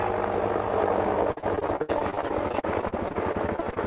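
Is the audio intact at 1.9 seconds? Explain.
No, 1.9 s falls inside a stretch of repeated packet loss (robotic sound) running from 1.32 to 3.78 s. Packets keep going missing, and each hole is patched by stretching the last sound, with gaps up to 62 ms. About a quarter of the span is concealed this way, giving choppy, robotic audio with pieces missing.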